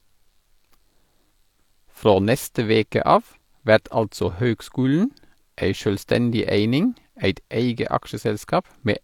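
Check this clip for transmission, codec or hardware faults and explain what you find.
One fault is present. Throughout the speech, heavy-compression artefacts remain and nothing sounds above 18.5 kHz: low-bitrate audio saved at a high bitrate, likely a low-rate encode re-saved as high-rate MP3.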